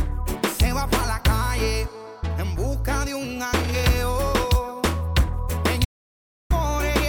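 At 5.85 s the sound cuts to silence with no room tone until 6.50 s, an audio dropout to silence of about 0.65 s, likely from the input briefly disconnecting.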